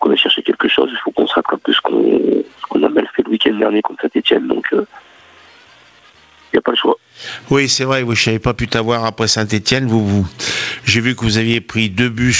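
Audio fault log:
throughout, gain pumping: the gain ducks by around 20 dB under each loud sound, squashing loud and soft together. The waveform shows flattened peaks, likely from excessive input gain driving a fast limiter.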